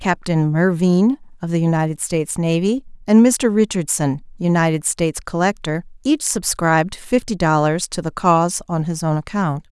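Nothing technical stands out in this short speech recording; it holds together without any audible trouble from beginning to end.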